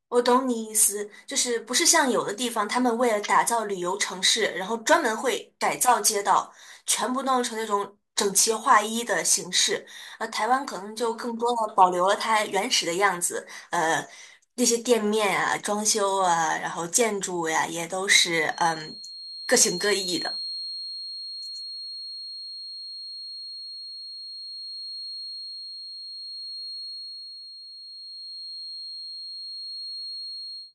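A feedback whistle enters at 18.45 s and runs to the end of the speech at 30.75 s: a thin, steady tone near 4.3 kHz sitting well under the voice, roughly 15 dB down, swelling and fading slowly in level. This is likely a loudspeaker-to-microphone loop held just at the edge of feedback, where one high frequency keeps recirculating and sustains itself without building into a full howl.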